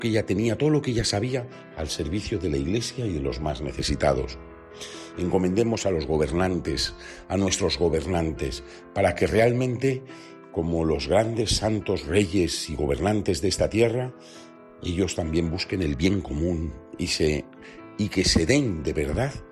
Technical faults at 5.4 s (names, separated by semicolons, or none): none